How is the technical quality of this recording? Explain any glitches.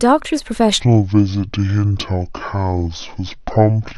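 The recording has one clear fault. From 0.8 s to the end, a section at the wrong speed takes over. The speech drops to about 0.56 times its normal rate. Pitch falls with it, roughly ten semitones lower. Voices turn deep, slow and drawn out, all at once. The cause is likely a playback or editing step running this stretch against the wrong clock, so the samples come out too slowly.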